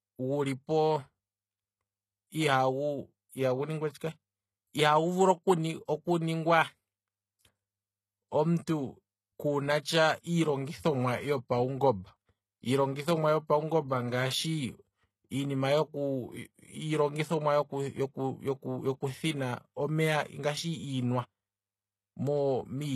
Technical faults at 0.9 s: HE-AAC compression

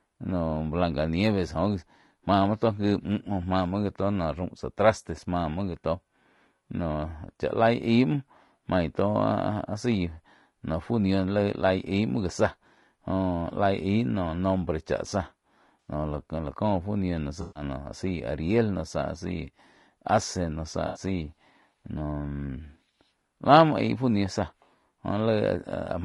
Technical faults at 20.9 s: low-delay AAC compression; AAC frame loss with concealment

